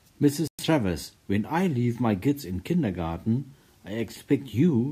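At 0.48 s the speech cuts out and returns at 0.64 s, with a silent gap of about 112 ms. This is likely a Bluetooth stall. Interference delayed packets, the headphones' buffer emptied, and playback paused until resent data arrived.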